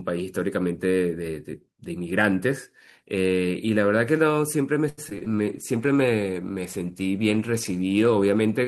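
Between 4.89 and 5.28 s, packets were lost or arrived too late over and over, producing repeated packet loss (robotic sound). Four gaps fall inside that short span, the longest about 81 ms. The decoder covered roughly a third of the stretch, about 121 ms, by stretching the last good sound forward, while about 60 ms went missing outright. The speech turns choppy here, with audible holes.

From 5.31 s to the end of the clip, the call's bandwidth estimate fell and the encoder's bitrate was cut from 32 to 14 kbps, a call bitrate drop. The bitrate sits at its lowest for about 2.85 s. With less than half the bits to spend, the speech is coded more coarsely and the upper frequencies are trimmed away, so the sound becomes duller, more muffled and watery and rough through to the end.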